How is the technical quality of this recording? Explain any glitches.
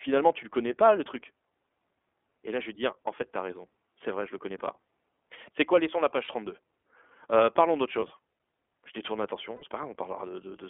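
The technical quality is limited: the speech has passed through a narrowband iLBC codec, and four brief packet losses interrupt it.

Throughout, the iLBC codec confines the sound to roughly 300 Hz to 3.4 kHz, so sibilants lose their hiss and the voice sounds thin and telephone-like. The codec models each short frame's excitation on its own, which leaves a plainly audible rough, slightly synthetic texture. The graininess points to a rate around 15 kbps. Unlike a simple low-pass filter, this adds buzzy texture as well as narrowing the band.

Lost iLBC frames occur at 4.58–4.61 s (20 ms), 6.24–6.29 s (40 ms), 8.00–8.03 s (20 ms) and 9.56–9.64 s (60 ms). These lengths fit whole 20 ms frames going missing. In each gap the decoder repeats the last pitch cycle blended with noise, so you hear a held, faintly buzzy vowel rather than silence. The 60 ms gap is the longest, three frames in a row. The voice snaps back cleanly straight afterwards, with no smeared recovery, because each iLBC frame decodes independently.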